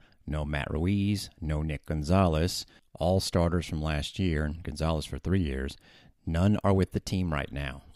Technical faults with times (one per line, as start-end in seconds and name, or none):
none